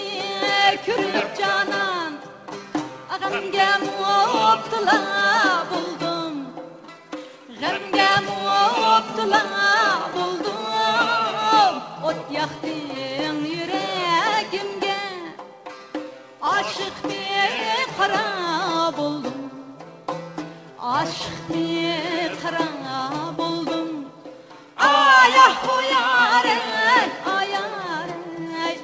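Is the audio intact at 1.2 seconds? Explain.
No. At about 1.14 s there is a skip ahead: roughly 400 ms of sound is missing, dropped before playback while later audio was already queued, so the stream jumps straight forward with nothing filled in. It is heard as an abrupt lurch, material simply gone. A waveform shows an instant seam where two unrelated stretches meet with no silence between them, and a spectrogram shows a hard vertical discontinuity, its bands stopping below 8 kHz as the call codec allows.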